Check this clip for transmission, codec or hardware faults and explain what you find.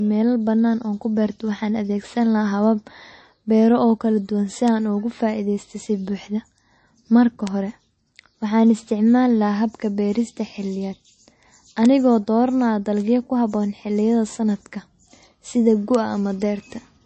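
Two faults are audible: a band-limited, watery coding sound throughout, and five isolated clicks.

MP3 compression, throughout: the speech stops dead around 8.3 kHz, and weak detail flickers between frames. This is likely MP3 encoding short of bits, consistent with a rate near 32 kbps, so the encoder drops the treble and zeroes quiet spectral lines. The result is a plainly audible swirly, metallic coloration with smeared consonants.

Bit error spikes at 4.68, 7.47, 11.86, 13.00 and 15.95 s: a flipped bit throws a sample's value up or down by a power of two before it snaps back. The one at 7.47 s fits a short run of about three samples. Each is heard as a single sharp, broadband tick unrelated to the speech.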